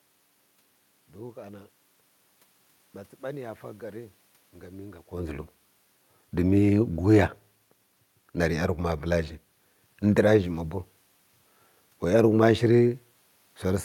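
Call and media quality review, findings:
Nothing to flag on the system side here; the background noise is just the room the mic sits in, and the level shift around the five-second mark is the talker moving relative to the mic.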